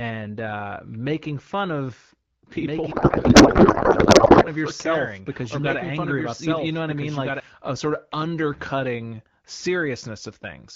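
A second capture path, likely running slower, mixes the speech in twice from 2.56 to 7.40 s, producing a doubled audio track: a dry copy about 5 dB quieter trails roughly one and a half seconds behind and cuts in and out abruptly. From 2.91 to 4.49 s, a codec payload misread occurs: the AMR wideband frames, which sound like octet-aligned packing being read as bandwidth-efficient, are decoded with their fields shifted, so the speech gives way to garbled noise and warble that barely tracks it.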